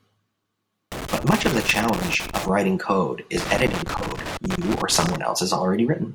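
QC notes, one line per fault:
0.92–2.49 s and 3.37–5.16 s: loose connector crackle, two irregular bursts of scratchy crackling over the speech. A worn or dirty contact is making and breaking as it shifts, chopping the signal on and off, and any DC on the line turns each break into a pop.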